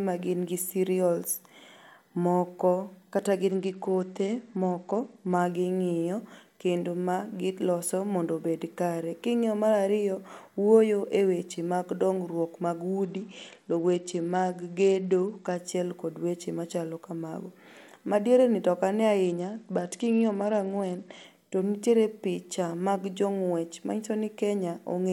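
At 3.51 to 5.41 s, 13.04 to 15.57 s and 19.24 to 21.24 s there's a Bluetooth SBC bit pool drop. The link starved, so the top sub-bands lost their bits and the rest got coarse. The speech goes dull and gritty, which fits a bit pool falling from 31 to 11 at around 83 kbps.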